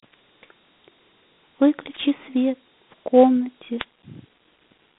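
Dialogic VOX ADPCM coding runs throughout: the speech sits in a 150 Hz to 3.7 kHz band with nothing above 3.8 kHz, plus gritty quantisation hiss consistent with 32 kbps 4-bit ADPCM. A spectrogram shows a hard ceiling. At 1.92 to 1.99 s and again at 3.77 to 3.85 s, a wireless microphone noise hit cuts in as the radio signal fades and receiver noise swells into a brief static swish, showing as short broadband smears on the spectrogram.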